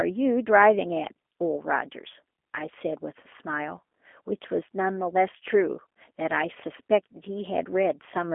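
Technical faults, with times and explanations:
Throughout, G.729 codec: the speech sounds plainly rough and synthetic and is confined to a 250 Hz to 3.4 kHz telephone band, with nothing above 3.6 kHz. Each 10 ms frame is resynthesised from a vocal tract filter, pitch predictor and sparse pulses, which fits an 8 kbit/s G.729A stream.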